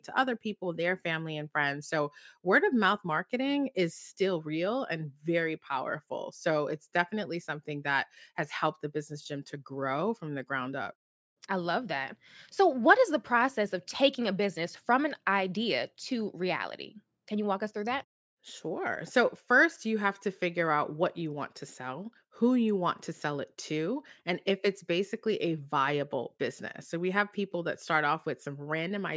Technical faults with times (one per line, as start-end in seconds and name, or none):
none